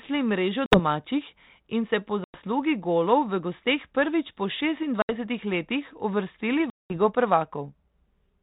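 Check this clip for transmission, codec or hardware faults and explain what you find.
The clip is speech carried over G.726 ADPCM at 32 kbit/s, with packet loss on an ADPCM call in four places. The gaps fall at 0.66–0.80 s, 2.24–2.38 s (after "in se po", before "golov v gosteh"), 5.02–5.13 s (before "letih uvrstili") and 6.70–6.98 s (after "letih uvrstili"). About 60, 100, 70 and 200 ms were lost, roughly seven to twenty packets each. Each gap is a hard-edged silence. The decoder's predictor and step size then mismatch the sender's, so speech resumes slightly distorted before settling.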